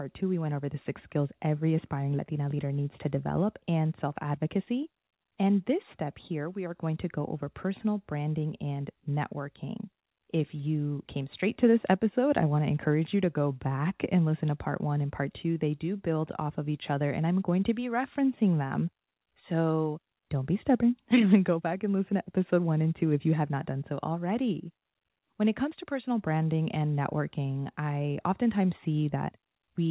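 No faults can be heard anywhere in this recording.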